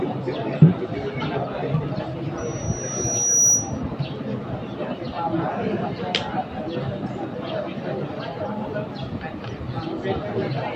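From 2.37 to 3.82 s, loudspeaker feedback squeal: the microphone re-amplifies its own speaker output, and a 5.8 kHz tone swells over roughly a second to about 10 dB above the sound. The spectrogram shows a brightening horizontal line; the waveform envelope balloons.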